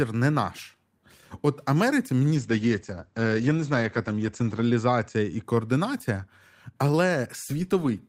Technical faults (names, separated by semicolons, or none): call bitrate drop